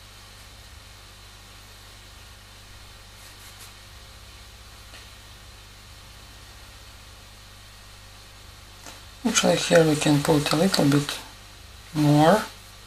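No technical faults can be heard in this audio; the signal stays continuous throughout.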